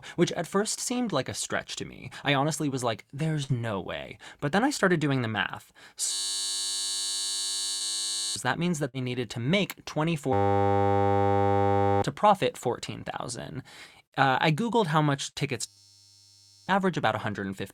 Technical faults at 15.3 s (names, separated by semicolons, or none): burst of packet loss